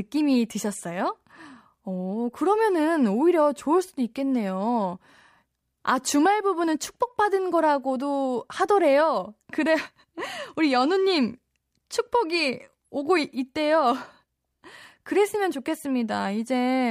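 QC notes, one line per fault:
Nothing stood out on listening to this speech recording.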